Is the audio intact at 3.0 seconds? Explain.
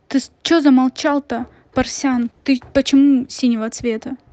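No, not quite. At 3.0 s you're inside a call bitrate drop that kicks in at 2.18 s and runs to the end of the clip. The call's bandwidth estimate fell, so the Opus encoder got squeezed from 48 kbps down to 15 kbps, sitting at that floor for about 1.3 s. With that few bits the speech is coded much more coarsely, so it comes across rougher and more smeared than the cleaner 48 kbps stretch before it.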